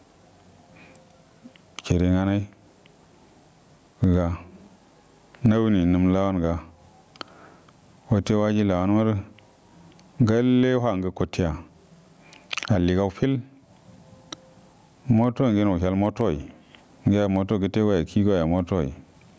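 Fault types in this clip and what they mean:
Gain pumping, throughout the clip: the gain is pulled down on each loud syllable, a swing of about 20 dB, leaving loud and quiet speech squashed together. The likely cause is a fast limiter reining in microphone gain set far too high.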